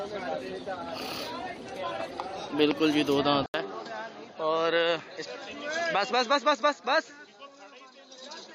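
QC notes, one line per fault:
3.46 to 8.55 s, input switched to a poorer device: after a silence of 80 ms the sound turns duller and about 5 dB quieter, with nothing above 7.6 kHz and a faint new noise floor. This is likely a switch to a narrower-band microphone.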